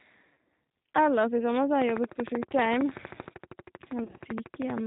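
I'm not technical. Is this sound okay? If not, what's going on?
No. Three separate problems can be heard in this speech recording.

The first runs through the whole clip: the G.729 codec. This is a low-data phone-call format that doesn't send the real sound. It sends a compact description of the voice, which the receiving end rebuilds. Everything above 4 kHz is dropped, so the speech sounds muffled and boxed-in, and the rebuilding leaves it plainly rough and slightly synthetic, like a poor internet call.

The second is VoIP packet loss concealed by the speech codec, heard twice. Pieces of the call never arrived, so the decoder guessed by stretching out the last sound it had while fading it down. At 0.33 to 0.37 s, a short stretch turns buzzy and thin. At 4.04 to 4.21 s, several small gaps spread across that span, none longer than about 30 ms. The voice turns buzzy or noisy in them, and it stays weak for a moment after.

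The third is a train of clicks from 1.82 s, just after "i sommer så har", until 4.79 s. It is a steady ticking of about 13 clicks per second, around forty in all, each well above the loudness of the speech and audible in the pauses too. The evenness and much the same shape of the clicks point to a likely cause in electrical interference or a faulty connection or power supply.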